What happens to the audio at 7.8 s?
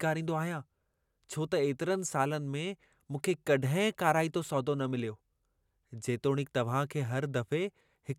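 Nothing goes wrong at 7.8 s; the speech runs on intact through that moment, with no dropout, click or distortion.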